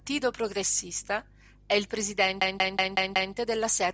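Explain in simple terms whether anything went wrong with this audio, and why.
A system hang loop runs from 2.42 to 3.34 s. The computer briefly froze while the sound hardware kept replaying the same 186 ms piece of speech, which fits an 8192-sample buffer. It repeats five times, about five per second, giving a machine-gun stutter.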